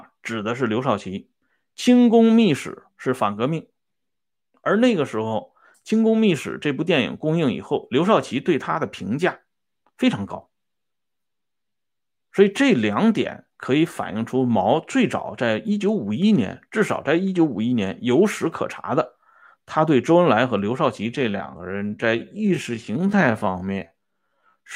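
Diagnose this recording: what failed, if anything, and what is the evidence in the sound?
From 21.05 s to 24.76 s the speech abruptly drags to about two-thirds pace, 0.668×, with pitch unchanged. This time-stretched section was likely made before storage by software that lengthened it by repeating short pieces.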